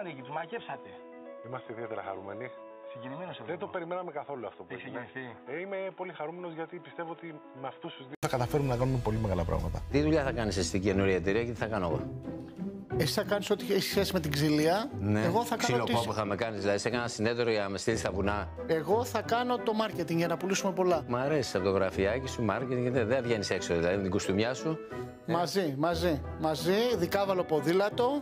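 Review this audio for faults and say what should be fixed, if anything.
From 0.0 to 8.23 s the sound is dull and boxy, about 10 dB quieter, with nothing above 3.8 kHz and a noise floor roughly 30 dB down. An 80 ms silence precedes the full-band return, likely an input switched to a poorer device. On a spectrogram this is a hard ceiling at 3.8 kHz that ends abruptly; the waveform shows smaller amplitude, then a brief flat gap. Lock the recording input to one device and disable automatic switching to headset call profiles.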